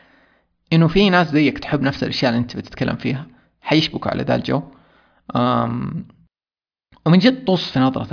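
No technical faults can be heard anywhere in the recording, as the signal runs continuously and steadily without interruption.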